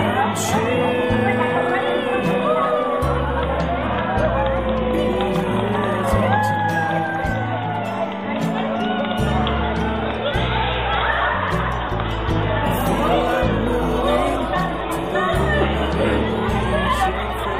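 No faults can be heard anywhere in this audio.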